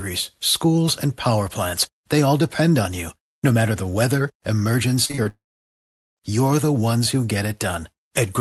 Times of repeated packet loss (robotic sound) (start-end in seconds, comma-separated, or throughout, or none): 5.05-5.27